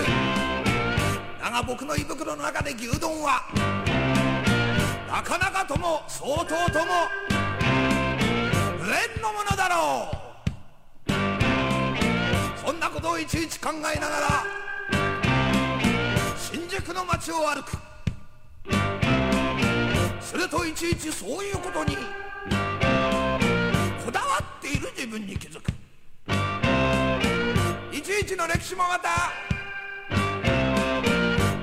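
No technical faults are audible.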